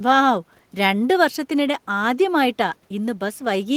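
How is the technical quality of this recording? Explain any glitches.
The recording has no technical faults or glitches to explain.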